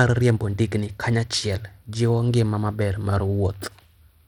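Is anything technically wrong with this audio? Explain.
Yes. Throughout the speech, the top end is thin and unstable, with high frequencies flickering in and out, and a gritty, granular noise clings to the sound. This is likely Bluetooth SBC compression at a starved bit allocation, consistent with roughly 96 kbps. SBC divides the signal into a handful of fixed sub-bands and shares out bits without a hearing model, so the weak upper bands get too few bits and the rest are quantised coarsely. A simple low-pass filter would give a clean, steady dullness instead of flickering treble and grit.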